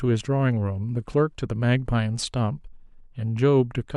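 A short speech recording with nothing technically wrong to report, so there are no times or causes to give.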